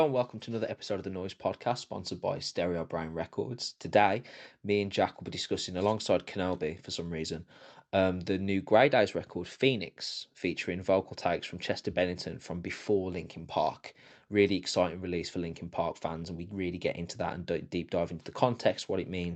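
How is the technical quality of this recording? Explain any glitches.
No glitches here; the speech comes through intact.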